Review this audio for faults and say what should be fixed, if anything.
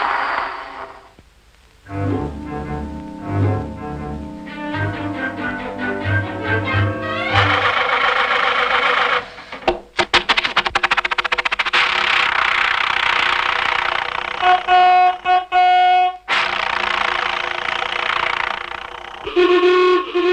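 At 10.03 s a skip ahead jumps straight past about a second of audio with no silence or fill, unlike a dropout, which leaves an audible gap.

From 14.46 to 15.92 s a jitter buffer speed-up trims short pitch-period pieces, about 150 ms in total, so the sound runs at 109% with unchanged pitch, unlike resampling, which shifts pitch.

To prevent both, size and adapt the jitter buffer so late packet bursts are absorbed gradually instead of being discarded or compressed.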